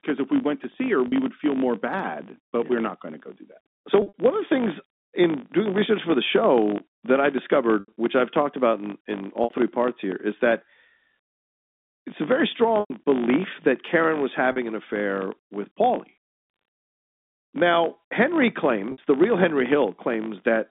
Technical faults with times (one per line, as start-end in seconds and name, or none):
0.00-20.71 filter restarted on every block
1.08-1.12 packet loss with pitch repetition
4.02-4.12 packet loss with pitch repetition
7.80-7.92 packet loss with pitch repetition
9.44-9.50 packet loss with pitch repetition
12.80-12.90 packet loss with pitch repetition
14.52-14.56 packet loss with pitch repetition
18.92-18.98 packet loss with pitch repetition